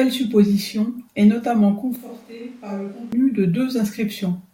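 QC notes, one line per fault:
1.96–3.12 s, switch to a distant microphone: after "supposition est notamment" the speech turns hollow, roomy and bass-light, about 10 dB quieter, with room noise about 25 dB below it, likely the close mic dropping out. Unlike a plain gain dip, the tone changes too, and it snaps back abruptly.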